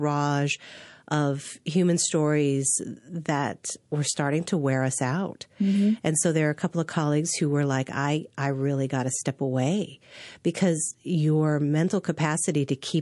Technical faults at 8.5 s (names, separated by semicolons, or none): MP3 compression